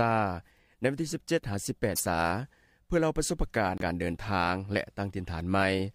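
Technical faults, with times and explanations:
1.95–2.01 s and 3.78–3.82 s, broken MP3 bit reservoir: The sound jumps ahead, then a brief chirp or noisy smear lasts a frame or two. Each glitch spans about 40 to 60 ms, matching 26.1 ms MP3 frames. The likely cause is missing frames, so later frames decode borrowed bytes from the wrong frame.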